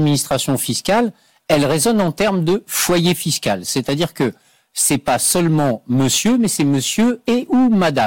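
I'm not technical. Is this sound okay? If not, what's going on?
No. Hard clipping runs throughout: the speech is too loud for the recording, so its peaks are cut flat for about a tenth of the time, giving harsh fuzz.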